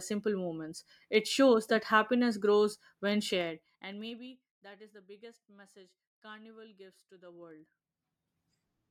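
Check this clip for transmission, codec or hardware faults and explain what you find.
The clip has zipper noise, in two places. From 3.33 to 4.44 s, after "that happiness grows when" and before "that is the biggest", the speech level falls by roughly 25 dB. From 7.17 to 8.45 s, after "gives to", it climbs back by about the same amount. Each fade moves in 2 dB jumps, about ten per second, with no smoothing between them. Every jump leaves a small click, so a ticking zip rides on the speech. The waveform envelope shows a staircase, and the spectrogram shows thin vertical broadband lines at each step.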